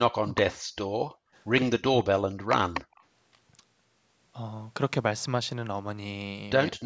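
From 0 to 0.69 s the speech dips by up to about 40 dB. This is speech suppressed in double talk, likely because the echo canceller could not tell the talker from loudspeaker echo and turned both down. From 0.97 to 1.35 s the room sound falls away by about 40 dB, then returns. This is background gated by the echo canceller, which clamps the microphone while the loudspeaker plays. The same speech suppression returns from 1.75 to 2.52 s, again cutting up to about 40 dB. From 2.84 to 2.95 s the background is gated once more, by about 35 dB. From 2.95 to 3.03 s a delayed copy of the voice, about 35 dB below the speech, arrives 169 ms late. This is an echo leak: likely loudspeaker sound the canceller failed to remove was sent back. At 6.7 to 6.84 s the speech is briefly suppressed again, by up to about 40 dB.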